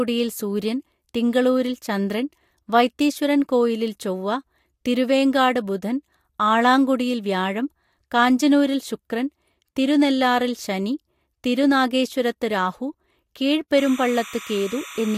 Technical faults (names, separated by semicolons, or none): timecode bleed